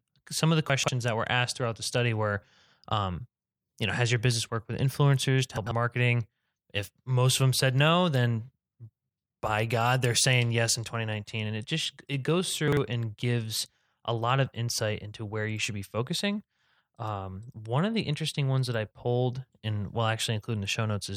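Speech, with three spots of chunks out of order: about 0.70 to 0.88 s after "of the", 5.57 to 5.71 s after "worked with influencers to", and 12.68 to 12.77 s after "it just it goes". Each time a roughly 46 ms block lands one to three blocks late, so the sound jumbles briefly at the hard joins.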